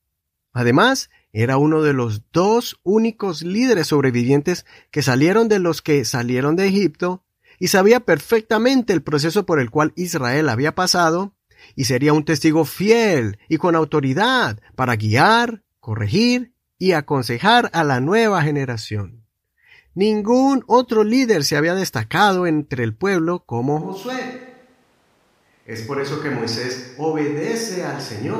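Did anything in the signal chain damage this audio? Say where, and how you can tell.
Yes. At 23.83 s the speech abruptly turns roomy and hollow, loses bass and drops roughly 10 dB. Background noise becomes more noticeable and stays until the end. This points to a switch to a distant microphone, likely after the close microphone's feed failed at the capture stage.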